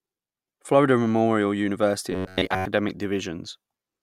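Speech, with robotic sound from repeated short buffers between 2.12 and 2.65 s. The sound turns into a rigid metallic buzz near 94 Hz. Most of that stretch is repeats. The likely cause is late audio patched by looping about 10.7 ms segments.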